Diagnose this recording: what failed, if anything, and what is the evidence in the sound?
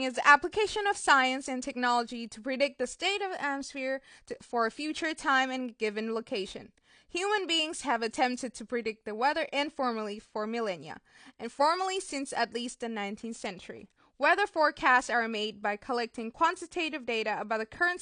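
Codec stage: plainly audible AAC compression throughout the speech, with nothing above 9.8 kHz, likely from low-bitrate AAC-LC near 32 kbps discarding the upper band.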